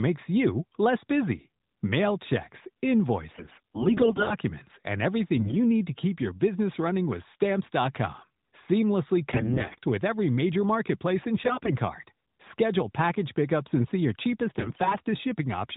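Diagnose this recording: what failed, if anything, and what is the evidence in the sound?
The failure is AMR bit errors on the mobile network link. The speech turns hoarse and gargly at 3.32–4.35 s, 5.36–5.57 s before "need to keep your", 9.32–9.79 s, 11.44–11.76 s after "every major marketplace and", and 14.58–14.97 s after "and see your cheapest". Pitch and level hold. Weakly protected bits in the narrowband AMR frames, which sound like 12.2 kbps mode, arrived corrupted, roughly one bit in ten to one in five. The decoder then drove its vocal model with misplaced pulses and wrong fine parameters.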